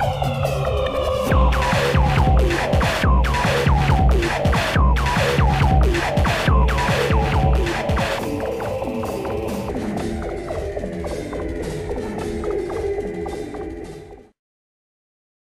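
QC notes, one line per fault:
9.69–15.48 s, section at the wrong speed: from 9.69 s to the end, the audio plays at about 0.77 times its recorded rate, most likely because this stretch was read out against the wrong clock, slower than the one it was captured with. Time and pitch stretch together, so everything drops roughly five semitones and drags, turning deeper and more sluggish at once. The change is abrupt.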